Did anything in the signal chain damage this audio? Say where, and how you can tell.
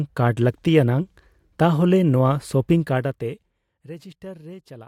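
Yes. Between 2.76 and 3.84 s the speech drops by about 20 dB, and that fade carries zipper noise, a fine ticking that rides on the sound only while the level is moving. The steps arrive at roughly 50 per second, which points to a gain update applied once per processing block of around 20 ms, in the driver, buffer or call-processing stage, with no ramp between blocks. Each abrupt gain jump leaves a small discontinuity, heard as the click.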